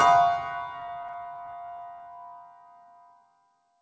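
From 0.80 to 2.02 s the sound stutters in thirteen brief repeated stalls. Packets arrived late, so the jitter buffer kept running dry. The receiver stretched the last sound to fill each gap, up to 14 ms, about 157 ms in all. Nothing is lost, but the sound drags. Throughout, nothing is heard above 8 kHz, which fits a wideband call codec.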